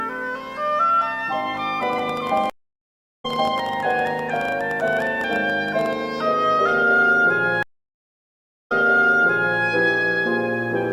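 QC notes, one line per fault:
1.83–5.94 s, train of clicks. Irregular popping at about 15 per second, roughly 70 clicks peaking about 5 dB above the sound. Likely interference or a faulty connection or power supply.
2.50–3.26 s, stream reconnect. The audio drops out for 0.74 s, then a fresh decoder resumes roughly 0.7 s further on, so material is skipped.
7.63–9.62 s, stream reconnect. A 1.08 s silence, then playback resumes 0.91 s earlier than where it broke, so a stretch repeats.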